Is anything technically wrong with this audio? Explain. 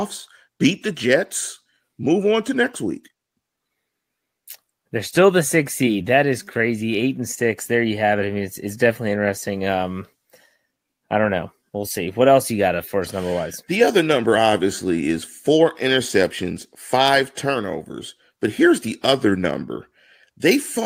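No, nothing is technically wrong with this audio.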